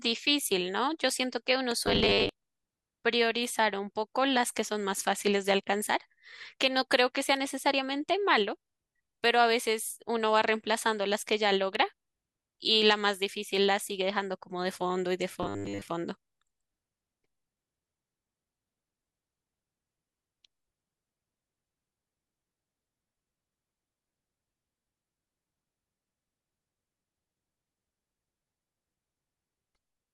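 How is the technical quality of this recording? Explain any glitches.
The recording has two kinds of glitch: two bursts of robotic sound and one electrical click.

From 1.86 to 2.29 s, and again from 15.43 to 15.82 s, the speech turns into a rigid, metallic buzz pitched at 100 Hz. This is robotic sound from repeated short buffers, likely caused by a 10 ms chunk being looped while audio arrived late. About half the first stretch and most of the second are repeats.

At 11.75 s there is a sharp snap on top of the speech, an electrical switching spike likely picked up from a nearby switch or static discharge.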